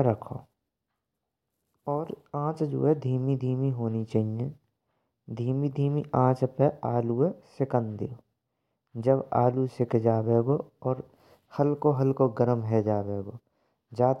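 Nothing stood out as a technical problem on listening to the speech in this recording.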